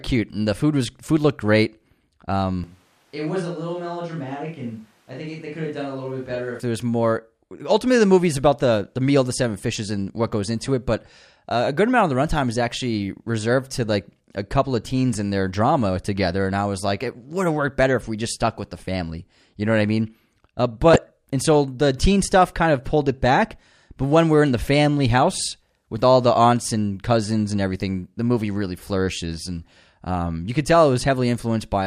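From 2.64 to 6.60 s the speech turns roomy and hollow all at once, thinner in the bass and roughly 10 dB quieter. The background noise rises to around 30 dB below the speech. The likely cause is a switch to a distant microphone, with the close microphone's feed lost, until the sound snaps back just before "there was more". On a waveform the envelope drops in a clean step. A spectrogram shows weaker low frequencies, smeared reverberant tails, and a raised noise floor between syllables.

From 20.93 to 20.98 s, just before "and so the teen", there is a brief burst of DAB burbling: a short disturbance lasting about 40 ms. Bit errors slipped past the error correction into the MP2 data, so wrong sample values put short blips of noise in single sub-bands. Three frames were corrupted at a low error rate of roughly 0.2%. A spectrogram shows isolated rectangular blocks of energy in separate frequency bands, and the waveform has a small jagged irregularity.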